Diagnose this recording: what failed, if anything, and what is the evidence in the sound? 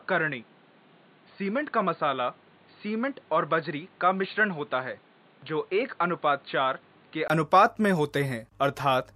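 Input switched to a poorer device from 0.0 to 7.3 s, likely at the driver or device-selection stage. Until then the sound is dull and band-limited to 4.5 kHz, a few dB quieter and carrying its own faint background noise. A 20 ms gap at 7.3 s marks the change back to the full-band input.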